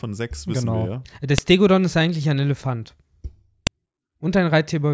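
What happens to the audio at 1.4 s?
At 1.38 s, just before "ist eigentlich ein", a sharp, loud click cuts in: a file header played as audio. Header bytes from a joined WAV piece play as samples, so the snap marks a splice, unrelated to the speech's level, unlike clipping.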